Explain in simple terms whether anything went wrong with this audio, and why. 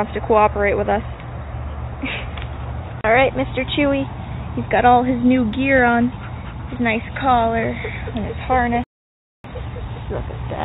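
At 8.84 s the sound suddenly goes silent for about 0.6 s, until 9.44 s. This is a playback stall. The player likely ran out of data briefly.

From 9.44 s to the end, a time-compressed catch-up follows. The player skips tiny slices to recover lost time. The sound runs 1.1 times faster, same pitch.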